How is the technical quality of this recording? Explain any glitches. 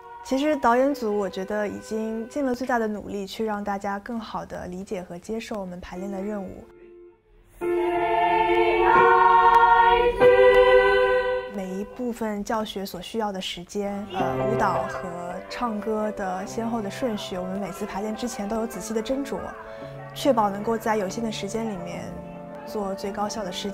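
The recording has a regular glitch, periodic USB or driver dropouts. Once a second, from 0.54 s to 23.55 s, something stalls the USB link or audio driver, and about a millisecond of audio drops out to silence, about twenty times in all. Each gap is a short tick, audible only when sound is present.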